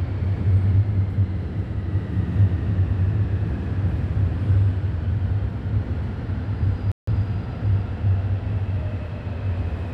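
A playback stall at 6.92 s cuts the sound off in mid-flow, leaving silence for about 158 ms before it resumes at 7.07 s. The player likely ran short of data or had its thread blocked, so output halted until it caught up.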